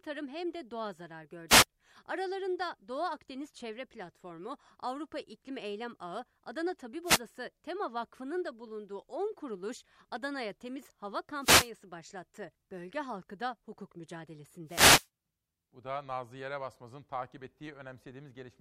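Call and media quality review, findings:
Wireless microphone noise hits in the speech: short static swishes at 1.48–1.65, 7.04–7.20, 11.40–11.70 and 14.66–15.08 s. Probable component is the analogue FM radio link, where reflections cancel the carrier and receiver noise rises. Check antenna placement.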